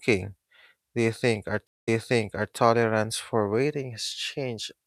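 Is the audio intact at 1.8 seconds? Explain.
No. A stream reconnect spans 1.67 to 2.54 s: the connection dropped and a fresh decoder restarted, so the speech falls silent for 0.2 s, then repeats from 0.67 s earlier.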